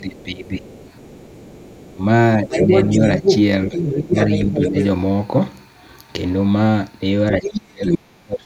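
From 0.0 to 0.65 s the talker's speech dips by roughly 15 dB. This is speech suppressed in double talk, likely because the echo canceller could not tell the near talker from loudspeaker echo while both sides spoke, so it attenuated everything. Overlapping this, from 0.21 to 1.95 s, the other side's voice is leaking through, faint, around 25 dB below the talker, likely where residual loudspeaker pickup survived cancellation.

From 1.95 to 4.77 s the suppression returns more gently, with drops of about 10 dB. From 2.5 to 4.84 s the leaked far-end voice is much stronger, roughly level with the talker, so the two compete directly.

At 7.38 s the most severe suppression begins and runs to the end, cutting the talker by as much as 35 dB so that stretches nearly vanish. Between 7.44 and 7.97 s the other side's voice again comes through at about the talker's level.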